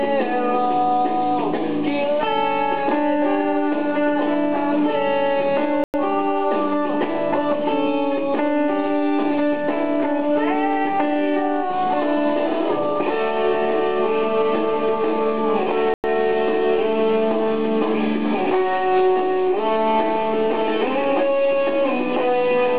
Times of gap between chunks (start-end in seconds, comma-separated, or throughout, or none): 5.84-5.94, 15.94-16.04